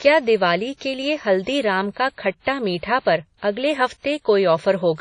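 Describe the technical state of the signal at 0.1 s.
At 0.1 s the speech carries plainly audible WMA compression damage, present throughout. Nothing sounds above about 10.1 kHz, with ringing, washy hiss, likely from a low-bitrate encode near 32 kbps.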